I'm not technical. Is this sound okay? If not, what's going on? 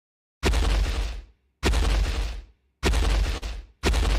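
No. At about 3.37 seconds there's a brief smear lasting until about 3.44 seconds, where the sound seems to wobble or blur for an instant before carrying on. This is short concealed packet loss: roughly 40 ms of the audio arrived too late to be played, so the receiving end patched the gap by extending the sound just before it for about 43 ms, then eased back into the real audio.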